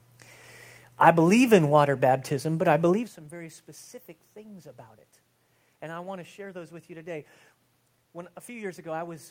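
No technical faults detected.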